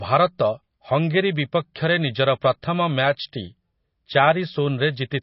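Throughout, the speech sounds watery and swirly, with nothing above 5.6 kHz. This is likely heavy MP3 compression, its bit-starved encoder dropping weak detail, which fits a bitrate near 24 kbps.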